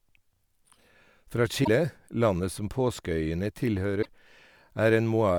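At 1.61 s the speech is disrupted for about 70 ms, ending by 1.68 s, and the same thing happens again from 3.99 to 4.06 s. Both are damaged data in a compressed stream: some of the data in the encoded file went bad, so the decoder misread those frames, lost sync and had to hunt for the next valid frame header. That's why you get a brief glitch instead of clean audio.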